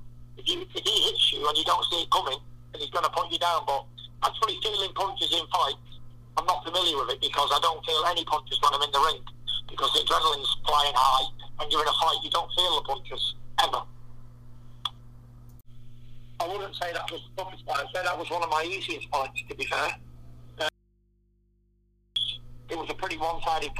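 From 20.69 to 22.16 s, an audio dropout to a faint residue cuts abruptly to hum about 40 dB down, with no fade, likely from an open input.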